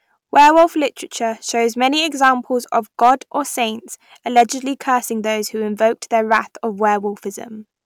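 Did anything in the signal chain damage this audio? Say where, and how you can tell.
Yes: hard clipping at the converter or input gain stage, at 0.36–0.64, 2.23–2.30, 3.02–3.11, 4.37–4.42 and 6.32–6.39 s. Peaks overdriven about 3 to 7 dB are sliced flat, which shows as squared waveform tops and broadband vertical smears on the spectrogram.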